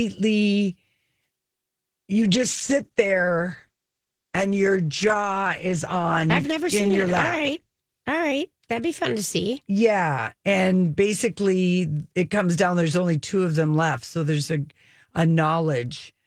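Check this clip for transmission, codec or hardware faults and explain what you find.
One transmission fault is present, a call bitrate drop. From 2.18 to 7.87 s, the encoder was starved of bits, consistent with a fall from 32 to about 13 kbps. Coarser coding turns the speech rough and muffled, with high frequencies cut away, until it clears at 7.87 s. A spectrogram would show the upper band missing and smeared detail for that stretch.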